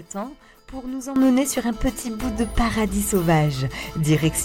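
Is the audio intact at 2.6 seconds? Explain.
No, at 2.6 seconds the audio is still inside a sudden gain jump that begins at 1.16 s and holds until the end. From that instant the sound and its background noise both sit about 12 dB louder, stepping up together. The likely cause is a digital gain change applied between one sample and the next with no ramp, such as a level setting or bit shift taking effect abruptly. At 2.6 s the level stays raised rather than recovering.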